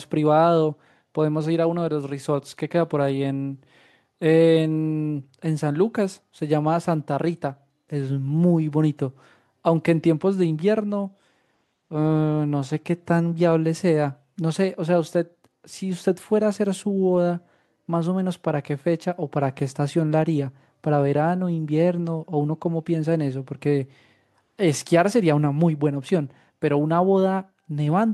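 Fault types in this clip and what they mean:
No faults found; the speech signal shows nothing to report.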